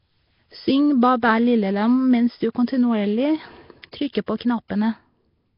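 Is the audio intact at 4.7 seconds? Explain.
No. At 4.68 s a burst of pre-echo arrives: short hiss spreads about 19 ms ahead of a sharp speech attack. The codec spreads its quantisation noise across a whole transform block, so noise sized for the loud onset leaks into the quiet instant before it, blurring and softening the attack. Beneath that, the whole passage carries a rough, hissy halo and a smeared, underwater character, with nothing above 5.3 kHz. This is likely Nellymoser compression at heavy strain, consistent with a bitrate around 22 kbps, where starved bands are filled with noise.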